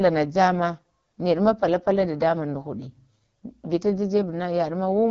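Throughout the speech, AMR wideband (HD Voice) coding is plainly audible. The rough, raspy texture points to one of the codec's lowest modes, around 8.85 kbit/s, where the pulse-driven vocal tract model is starved of bits. Nothing reaches above 7.5 kHz.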